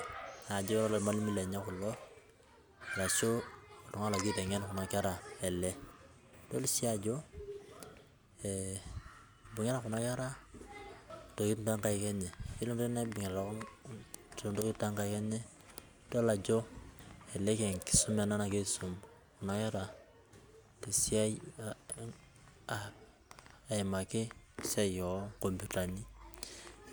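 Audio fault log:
11.10 s and 17.00 s: audio missing between chunks. The recording was likely processed in 6-second blocks, with a short stretch dropped each time one block closed and the next began. At both points about a tenth of a second of speech vanishes and the sound on either side is butted together with no gap. The result is two abrupt skips, about six seconds apart, where the speech jumps forward mid-flow.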